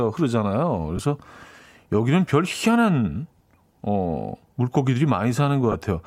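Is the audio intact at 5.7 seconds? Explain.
No. Lost LE Audio frames drop about 20 ms, 5.72 to 5.74 s, fitting two frames. The decoder refills the gap with random-sign spectrum, giving a brief noisy smear.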